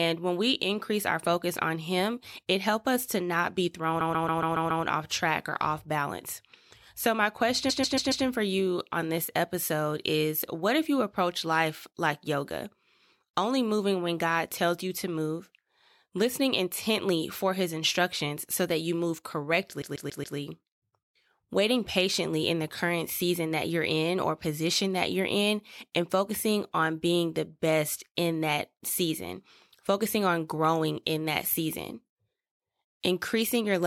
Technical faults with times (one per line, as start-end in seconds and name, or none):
4.00-4.83 repeated frames
7.69-8.24 repeated frames
19.81-20.37 repeated frames